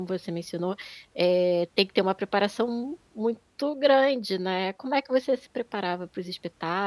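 Nothing in the recording stood out as a problem on listening.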